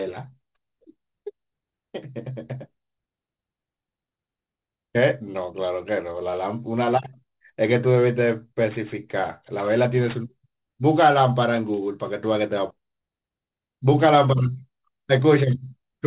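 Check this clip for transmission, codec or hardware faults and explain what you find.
Aliasing runs through the whole clip. The speech has a gritty, metallic edge, sharpest on sibilants, with a faint layer of unrelated, wrong-pitched tones riding beneath the voice at roughly 25 dB down, and the spectrum pushes hard right up to about 4 kHz. The cause is a sample-rate reduction, which fits a drop from 44.1 kHz to 8 kHz, without an anti-alias filter. Content above the new 4 kHz limit folds back down into the audible band instead of being removed.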